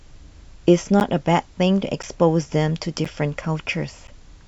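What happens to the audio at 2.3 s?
At 2.3 s the speech falls within a run of periodic USB or driver dropouts lasting from 1.0 to 4.08 s. About once every 1.024 s, something blocking the USB bus or audio driver interrupts the stream. Roughly 10 ms of audio is lost each time and replaced by silence, so the speech carries a regular tick or pop. On the waveform each gap is a short flat line. The spectrogram shows it as a narrow blank vertical stripe edged by broadband click energy.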